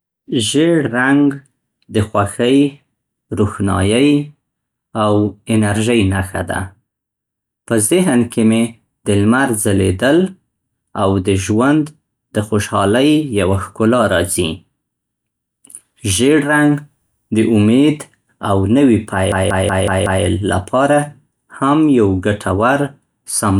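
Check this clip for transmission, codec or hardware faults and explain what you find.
One fault: a system hang loop from 19.32 to 20.25 s, after "د امید او نوي" and before "لپاره هم یو ګټور". The driver froze while the hardware replayed its buffer: a 0.19 s piece repeats exactly five times, a 5.4 Hz machine-gun stutter fitting an 8192-sample buffer. Unlike a dropout, no silence is heard and essentially no speech is lost.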